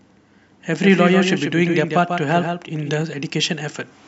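From 0.80 s to 3.02 s there is a doubled audio track. A full-band copy of the speech trails about 150 ms behind, about 5 dB quieter. It has no decay or room colour. It likely comes from a slower second capture path. It starts and stops abruptly.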